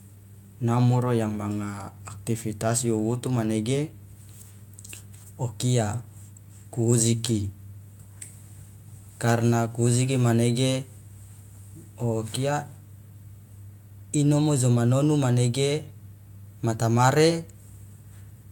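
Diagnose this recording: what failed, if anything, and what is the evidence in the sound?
Nothing in this recording points to a failure at any stage, so there's really nothing to diagnose here.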